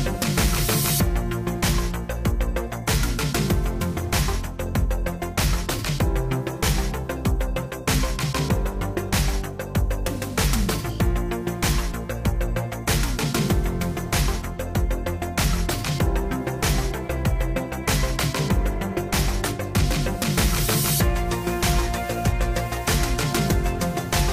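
Nothing goes wrong anywhere in this recording, so there's no technical fault to point to at any moment along the way.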